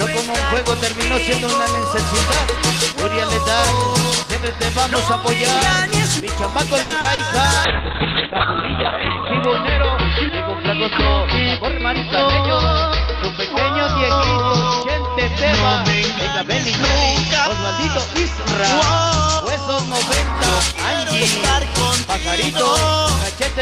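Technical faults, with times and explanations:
6.81–7.21 s, repeated packet loss (robotic sound). Three holes open in quick succession, the longest 90 ms. About 170 ms is patched by stretching the last sound, and 80 ms is simply missing. Nearly half this stretch is concealed, so it turns choppy.
7.65–19.97 s, call bitrate drop. The encoder's budget falls from 32 to 6 kbps, bottoming out for 1.65 s. Coarser coding makes the audio rough and watery. The band shrinks from 20 kHz to 4 kHz, so everything sounds muffled until the rate climbs back.
11.59–13.49 s, jitter buffer speed-up. Too much audio had piled up in the receive buffer. To cut the delay, tiny pitch-period slices were removed again and again, roughly 70 ms in all. Playback runs about 3% fast at unchanged pitch.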